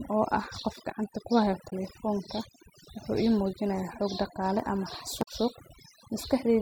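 Right from the start, overdone noise removal has pushed quiet bands of the speech under along with the noise, so the background sparkles over near-silence. At 1.66 to 1.73 s and again at 5.19 to 5.28 s there's damaged data in a compressed stream: the decoder misreads corrupted frames and blips.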